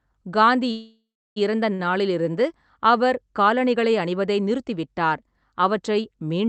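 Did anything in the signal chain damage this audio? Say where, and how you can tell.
Yes, at the network and jitter-buffer stage of the call path. From 0.71 to 1.38 s there is a call audio freeze: the last sound is drawn out as a fading buzz that decays into roughly a third of a second of silence, then the audio picks up exactly where it stopped. That points to packets held up in transit, likely leaving the jitter buffer empty for about 648 ms. It differs from packet loss because nothing is skipped. A gap is inserted, and everything after it arrives later.

A second, much smaller event comes at 1.74 to 1.81 s: a short stall from a late packet. One sound is held for about 48 ms with a faint buzzy dip, and then the audio continues without a jump. It is not a second freeze because it never fades to silence and is far too brief. The receiver simply stretched the last sound until one overdue packet turned up. 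The band tops out near 8 kHz, which fits Opus at around 32 kbps.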